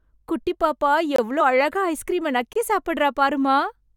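At 1.16 to 1.18 s the speech drops into a block of digital silence lasting 23 ms. The signal cuts out and back with no fade, and the whole event reads as a short hole. The length fits a 1024-sample buffer that was not filled in time and was sent out empty. The same fault recurs at 2.53 to 2.55 s with an identical 23 ms length, which again points to one missed buffer of that size.

At 1.40 s compressed frames are skipped. The frame length here is 23.2 ms, and about two frames, around 50 ms of audio, never reach the output because they were missing or rejected by the decoder as damaged. The speech jumps forward by that amount.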